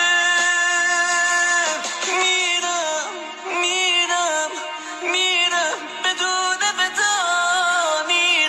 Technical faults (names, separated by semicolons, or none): none